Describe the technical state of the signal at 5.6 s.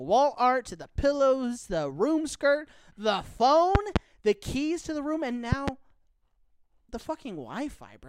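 A loud pop runs from 5.52 to 5.70 s, just after "to the room and": two sharp thumps in quick succession, peaking around 15 dB above the speech, which carries on underneath. A sudden voltage step or pulse has been added to the signal, likely from a plug, a switch, static or a driver glitch, and the downstream circuitry has shaped each pulse into the sharp thump heard here.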